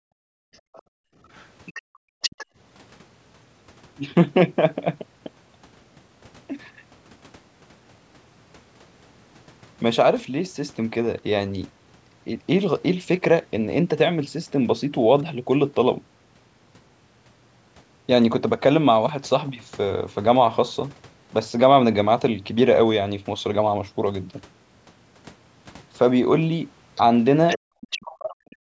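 A speech recording from a call whose audio stops at 8 kHz, as the call's microphone processing would leave it, with echo-canceller faults at both ends. The background is gated by the echo canceller from 0.0 to 1.18 s and again from 1.82 to 2.48 s, with the room sound falling by about 39 to 40 dB for roughly a second in the first stretch and under half a second in the second. It dips once more, by about 39 dB, between 27.58 and 27.74 s. It is the room tone that sinks while the loudspeaker plays and comes back when the canceller releases, which separates this from network dropouts, where everything vanishes with abrupt glitches. Over the same openings, from 0.53 to 2.46 s and from 26.95 to 28.01 s, the other side's voice leaks through, sitting around 20 dB and then around 10 dB below the talker. The likely cause is far-end audio from the loudspeaker that the canceller failed to remove. Because it is a separate, second voice rather than a delayed copy of the talker, this is not room reverberation or the talker's own echo. 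From 28.02 s to the end, near 28.6 s, the talker's speech is suppressed in double talk, dropping by around 40 dB for most of that stretch, likely because both sides spoke at once and the canceller turned everything down. Unlike the gating, it is the talker's own speech that collapses here, not merely the background.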